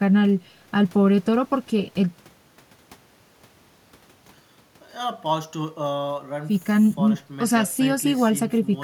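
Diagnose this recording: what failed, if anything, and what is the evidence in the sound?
No fault found.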